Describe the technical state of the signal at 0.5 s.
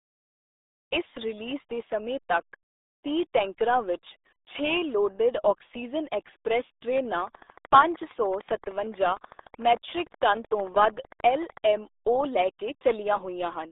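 At 0.5 s the speech carries RealAudio 14.4 codec damage, present throughout the clip. The very low-rate coding, which fits an 8 kbit/s dial-up codec, confines the sound to roughly 300 Hz to 3.7 kHz, with nothing above 3.8 kHz, leaving it heavily muffled and gargly.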